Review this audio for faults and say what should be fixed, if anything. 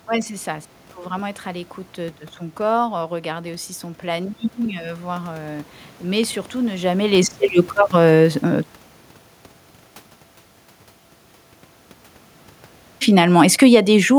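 A double loud pop, two sharp thumps roughly 10 dB above the speech, lands between 6.24 and 6.48 s, right after "voir heu mais" and before "ne jamais laisser le", with the speech continuing underneath. It is likely a voltage transient from a cable, switch or static discharge. Securing connectors and grounding the setup would prevent it.

From 13.03 to 14.04 s the automatic gain is falling. The level sinks by about 3 dB, and the speech and room noise fade together, separate from the talker's movement around 6.5 s. The control found the input too loud or too noisy for its starting gain and pulled its gain down. Setting a fixed input gain with enough headroom would prevent it.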